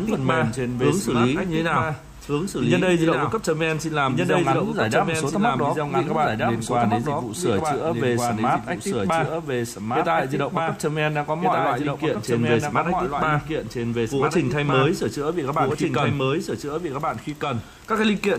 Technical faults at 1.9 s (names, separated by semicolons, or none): doubled audio track